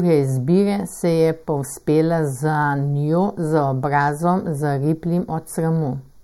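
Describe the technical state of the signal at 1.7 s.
At 1.7 s, as throughout the clip, one channel lags the other by about a fifth of a millisecond before the two are summed to mono: channel delay, or comb filtering. The speech sounds hollow and phasey, with its first cancellation notch around 3 kHz.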